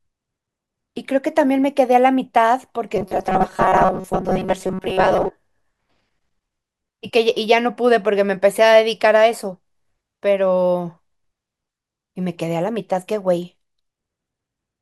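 Robotic sound from repeated short buffers runs from 2.96 to 5.31 s. For those two-odd seconds the speech becomes a rigid, metallic buzz pitched near 188 Hz that still loosely tracks the words. The likely cause is fresh audio arriving too seldom, so a fragment of about 5.3 ms is looped to fill the gaps. Around 70 percent of the sound is replaced by repeats, and that fixed loop length imposes the steady pitch.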